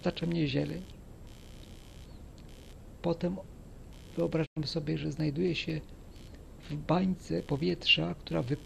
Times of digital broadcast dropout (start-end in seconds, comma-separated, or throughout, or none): 4.45-4.58